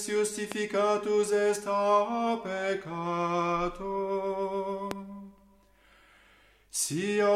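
At 0.52 s and again at 4.91 s there is a loud pop, a single sharp thump of about 27 ms that jumps to roughly 15 dB above the surrounding level. The likely cause is a voltage step from static, a switch or a connector reaching the signal path, with the following circuitry rounding it into a brief pulse. Unlike a dropout or an edit click, the sound continues unbroken underneath each pop.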